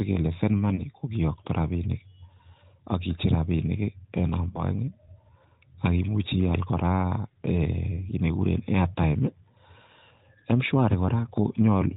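Speech over an AMR narrowband link, its spectrogram cut off at 4 kHz, with lost AMR speech frames at 0.76–0.84 s and 4.50–4.63 s. Each frame failed its checks, and the decoder refilled the gap from the last good frame at falling gain. The result is a brief warble at 0.76 s and a drawn-out, fading sound at 4.50 s, a smeared, fading patch on the spectrogram and a dipping waveform envelope. The gaps fit one and two 20 ms frames.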